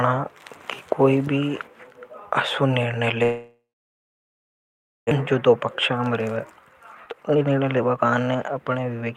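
Right after "असो निर्णय", at 3.23 s, the speech breaks off until 5.13 s. For a brief moment the last sound carries on as a fading buzz, and then about 1.4 s of near silence follows. The likely cause is a long network dropout. Roughly a second of speech is simply gone, and the talk resumes further on. Short packet-loss concealment patches only tens of milliseconds, but this gap is long enough that the concealment gives up and goes quiet.

From 5.21 s to 9.12 s the speech runs about 20 percent fast. This is a jitter buffer speed-up: after the gap, the receiver found itself holding roughly 0.7 s more audio than it wanted. It trimmed that backlog by cutting many tiny pitch-period slices. The delivery sounds hurried, but the pitch stays unchanged. That tells it apart from a resampling or clock error, which would raise the pitch along with the speed.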